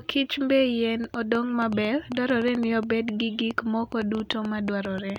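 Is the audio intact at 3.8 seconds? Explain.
No. At 3.8 seconds the speech sits under a train of clicks that runs from 1.04 to 5.17 s. Sharp, similar pulses arrive at about 6.6 per second, spaced unevenly. Over the span that adds up to around thirty clicks. They peak a few decibels above the speech itself, so they stand out as ticking and popping, even in pauses. The likely source is electrical interference from nearby equipment or a faulty connection or power supply.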